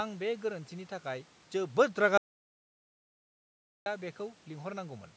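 At 2.18 s the speech cuts off abruptly into an audio dropout to silence that lasts until 3.86 s, about 1.68 s of lost material. The input was likely interrupted, by a lost connection or a momentary mute, while recording carried on writing silence, so even the room noise vanishes. On a waveform this shows as a flat line; on a spectrogram, a dark vertical band with hard edges at both ends, where the speech resumes mid-flow.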